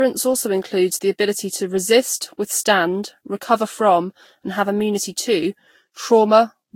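Speech with generation loss throughout: swirly, hollow smearing and blurred attacks, worse than one Vorbis pass near 62 kbit/s would cause, likely from about seven re-encodes.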